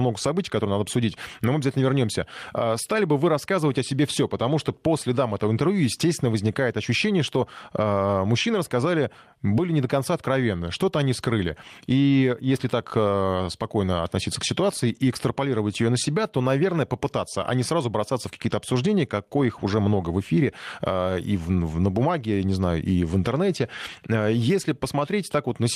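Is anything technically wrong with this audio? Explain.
No technical faults are audible.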